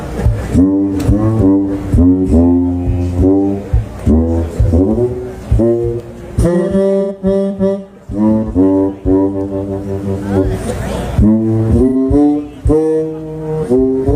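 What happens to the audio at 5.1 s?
Nothing goes wrong at 5.1 s; the audio carries straight through that moment without a dropout, click, glitch or other fault.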